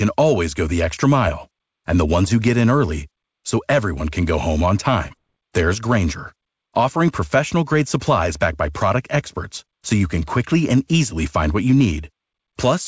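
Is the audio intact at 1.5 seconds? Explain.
Yes, the audio is intact at 1.5 seconds, with no dropout, glitch or distortion at that point.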